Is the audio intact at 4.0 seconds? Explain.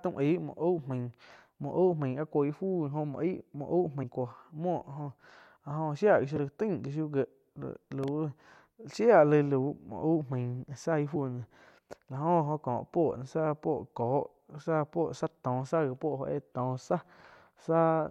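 No. Between 4.02 and 4.04 s there is damaged data in the compressed stream: corrupted bytes make the decoder misread its frames and lose sync until it finds the next frame header. The speech is briefly broken by a short glitch.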